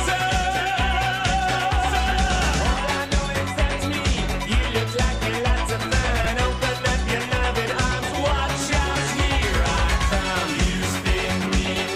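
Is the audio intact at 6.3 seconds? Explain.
No. At about 6.25 s there is a click, almost a brief buzz, from a repeated buffer. New audio did not arrive in time, so the playback device played the last block again, twice more, with a hard join at each repeat. Each block lasts about 5.8 ms, which fits a 256-sample buffer. Because the repeated piece is so short, it comes across as a click rather than a stutter, and around 10 ms of the actual audio is lost there.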